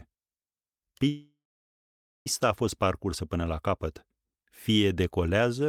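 Delayed packets likely drained the jitter buffer, causing a call audio freeze from 1.08 to 2.27 s: a fading tail, 0.88 s of silence, then "a fost" resumes intact.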